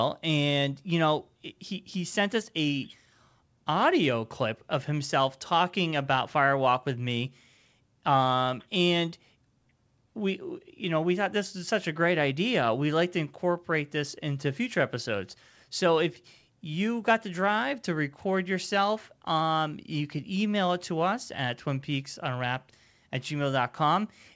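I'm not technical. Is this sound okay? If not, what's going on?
Yes, no faults here.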